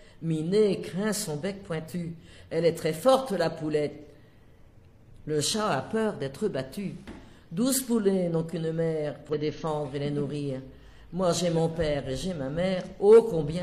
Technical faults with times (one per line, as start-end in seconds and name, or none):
9.29-9.35 damaged data in a compressed stream